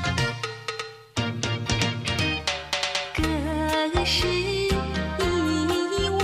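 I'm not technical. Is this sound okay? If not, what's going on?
No, there are CD scratch ticks: six tiny clicks between 2.73 and 3.53 s, each a split-second glitch where a disc blemish spoiled the data.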